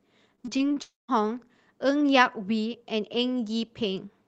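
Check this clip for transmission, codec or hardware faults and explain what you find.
Two transmission faults sit close together early in the speech, both from losses on a network call path whose sound tops out near 8 kHz, which fits wideband Opus at a modest bitrate.

Repeated packet loss (robotic sound), 0.35 to 0.78 s: six short gaps open in the stream, the longest about 22 ms. Each one is filled by extending the last received sound, and the next gap arrives before the speech settles, so about a quarter of this stretch is patched rather than real. The patched bits give the speech a choppy, buzzy, robotic texture with small pieces missing.

Long network dropout, 0.82 to 1.10 s: the sound then breaks off for roughly a quarter of a second, most likely because the connection delivered nothing for that time. The receiver first carries the last sound forward as a fading buzz, then, for about 170 ms, leaves only silence. 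The speech resumes after 1.10 s, and the part lost during the gap is simply absent.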